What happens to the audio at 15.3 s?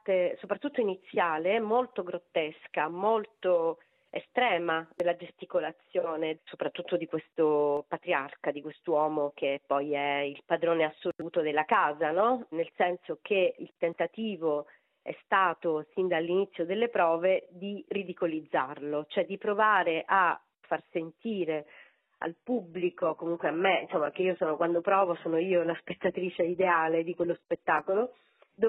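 Nothing goes wrong at 15.3 s; the audio plays through that moment intact, with no dropout, click, glitch or other fault to be heard there.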